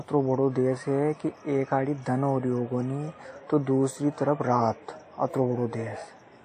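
WMA compression runs throughout the speech, likely the cause of its plainly audible damage. Quantisation noise smears across long transform blocks, giving a ringing, washy hiss that swells with the signal. Nothing survives above 14.1 kHz, which fits a low bitrate near 48 kbps.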